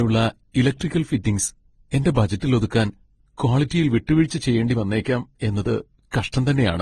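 Throughout, the speech carries layered smearing and swirly artefacts, likely from transcoding between lossy codecs. The spectrogram shows nothing above 12.2 kHz, with blotchy, doubled quantisation texture below.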